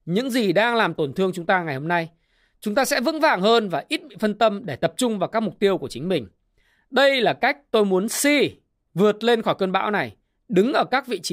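Nothing technically wrong turns up anywhere in this recording of speech, so there's no fault to point to here.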